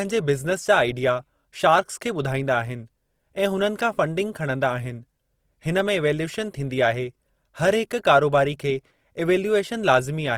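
Opus compression, likely at a low bitrate near 24 kbps, affects the whole clip: band energies are kept but noise-filled, so the speech sounds rough and grainy, with content reaching 20.4 kHz.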